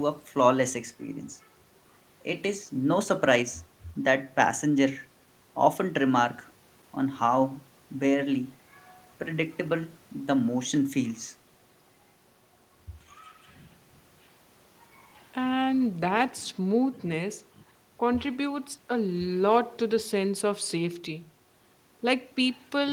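No technical faults can be heard anywhere in the recording.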